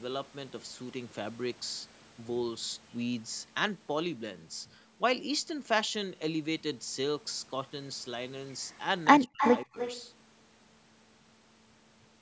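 From 9.26 to 9.42 s the speech suddenly collapses, falling by roughly 40 dB for about 150 ms so the sound almost vanishes. This is likely speech suppressed in double talk. With both ends talking at once, the echo canceller could not tell the near talker from the loudspeaker echo and pulled the whole signal down.

Overlapping that, from 9.38 to 10.01 s, a fainter delayed copy of the speech trails about 299 ms behind, sitting around 10 dB below the main level, in band-limited call audio that carries nothing above 8 kHz. This is likely an echo leak. The loudspeaker side's echo canceller probably failed to remove all of its loudspeaker sound from its microphone, so part of the call was sent back.

A second, shallower dip comes at 9.65 to 9.77 s. The speech drops by about 25 dB for roughly 100 ms, a chopped gap again consistent with double-talk suppression while the echo is still present.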